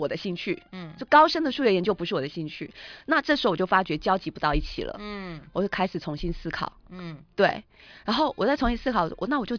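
Nothing in this recording trips any alarms: there's no dropout, glitch or distortion to point to anywhere along the way.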